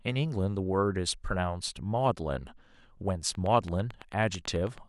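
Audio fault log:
3.35–4.79 s, train of clicks: likely electrical interference or a faulty connection injecting regular pulses, about 9 per second, roughly fifteen sharp ticks peaking about 5 dB above the speech.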